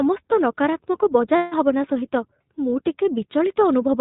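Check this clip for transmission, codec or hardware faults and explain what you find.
Two problems show up here, one running the whole way through and one short dropout.

The iLBC codec damage is plainly audible from start to finish. The band stops at 4 kHz, so everything sounds narrowband and boxy, and the speech has that slightly rough, synthetic edge you get when each frame's excitation is coded on its own. The frame rhythm and the level of grit fit the 20 ms, 15.2 kbps mode. It's intelligible, but the character of the codec is hard to miss.

Then there are lost iLBC frames from 1.36 to 1.54 s, a gap of 160 ms, which fits about eight 20 ms frames going missing. With nothing to decode, the decoder keeps repeating the last pitch cycle with some noise mixed in and fades it as the gap goes on. What you hear is a held, faintly buzzy vowel hanging where the audio should have moved on. Since iLBC frames don't depend on each other, the voice snaps back cleanly right after 1.54 s.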